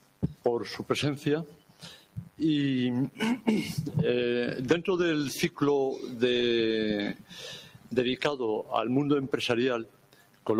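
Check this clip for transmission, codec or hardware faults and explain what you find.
A speech-oriented noise suppressor was left active on non-speech sound, and it runs through the whole clip. Because it treats steady tones, ambience and reverberant tails as background noise, it keeps pulling their gain down while letting sharp onsets pass. Its attenuation swings by roughly 10 dB as the material shifts between transient and sustained, so the level pumps and flutters, and held sounds and decays come across thinned and hollowed.

The suppressor also produces distinct dips where it mistook the sound itself for noise, at 0.00–0.45 s, 1.47–2.39 s, 7.14–7.37 s, 7.60–7.92 s and 9.85–10.46 s. In each stretch it pushed the gain down by about 11 to 12 dB at its deepest, over a few hundred milliseconds and closer to 0.7 s in the second and last. The sustained or fading parts sink and their tails are clipped short.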